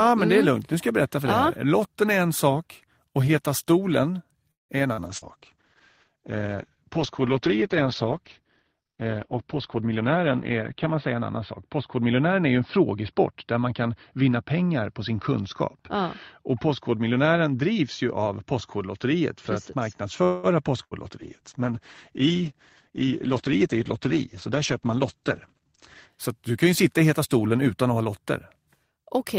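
At 4.51 s the speech stops and is replaced by a brief continuation of the last sound that quickly dies into about 170 ms of silence, before resuming at 4.72 s exactly where it left off. This is a call audio freeze, likely caused by delayed packets draining the jitter buffer so the receiver had nothing new to play. Nothing is lost, but roughly 0.18 s of extra delay has been inserted into the call.

Two short concealed packet losses follow, at 4.93 to 5.00 s and 5.17 to 5.25 s. In each, about 40 ms of audio never reached the decoder in time, and the receiver extrapolated from the preceding sound before blending back into real audio. They are heard as short smears or wobbles.

From 5.08 s a call bitrate drop sets in. The encoder rate falls from 32 kbps to 9 kbps, and coded bandwidth shrinks from 20 kHz to 6 kHz. The speech turns muffled and coarse, with a watery texture, bottoming out for about 5.5 s. 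A second drop starts at 21.22 s, going from 32 kbps to 10 kbps and staying at the lowest rate for about 4.9 s. The degradation ends at 26.16 s.

Between 9.75 and 11.98 s a jitter buffer speed-up plays the speech at about 108% speed with unchanged pitch. The buffer had accumulated excess audio, so the receiver trimmed many short pitch-period segments, removing about a fifth of a second in total. The result sounds hurried. A shorter speed-up at 22.91 to 23.49 s, also at 108%, removes about a twentieth of a second.

A second call audio freeze runs from 20.23 to 20.46 s. Here the last sound is stretched as a fading buzz or hiss for the whole 200 ms, without reaching silence. The speech then resumes with no content missing but 0.2 s later than before.

At 20.83 to 20.94 s a burst of packet loss takes out about 80 ms. The receiver sustains the previous sound and attenuates it across the gap, giving a held buzz or fading hiss. 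The speech then jumps ahead, and the missing segment is gone.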